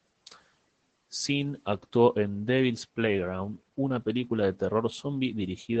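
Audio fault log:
Throughout: Opus voice compression. The speech is plainly damaged by the codec. Nothing reaches above about 8.8 kHz, so the band stops at wideband and the top of the voice sounds muffled. The linear-prediction coder models each stretch of the vocal tract and spends few bits on the excitation. That coarse excitation makes the voice hoarse and slightly robotic, which points to SILK-only coding at a low bitrate, around 12 kbps.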